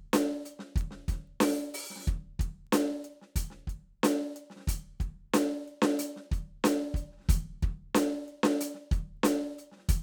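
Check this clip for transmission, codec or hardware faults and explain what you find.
There's one fault here: word clock ticks running through the music from 0.34 s to 9.63 s. The receiving device isn't locked to the sender's clock, and the mismatch of roughly 50 ppm lets one sample slip about every half second. You hear around twenty sharp ticks.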